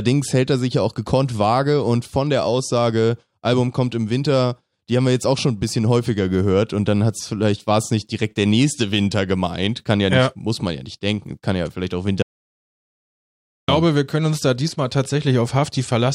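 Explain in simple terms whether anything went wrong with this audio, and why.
Audio dropout to silence at 12.22 to 13.68 seconds: right after "ja vielleicht auch" the speech cuts to dead silence, with no background hiss at all, until "wir können uns da". The input was likely lost briefly, so about 1.5 seconds of speech is gone.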